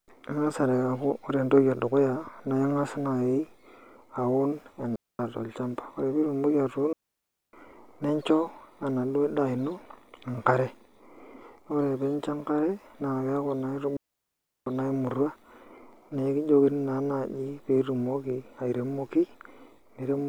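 Digital wireless dropouts occur at 4.96 s, 6.93 s and 13.97 s, where the speech cuts to near silence for about 0.24 s, 0.61 s and 0.70 s. In each case the receiver lost too much of the digital stream to rebuild the signal and muted itself with a very fast fade. The result is a clean hole in the speech, with no crackle or burst of noise at either edge.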